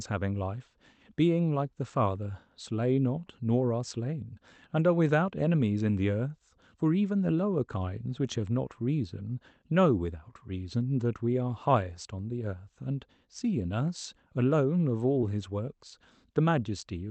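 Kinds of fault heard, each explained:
Short concealed packet loss: near 15.21 to 15.24 s about 20 ms of the speech arrived too late. The decoder stretched the preceding sound over 10 ms before blending back, causing a brief smear. A spectrogram shows a smoothed, repeated patch, and the waveform a soft seam.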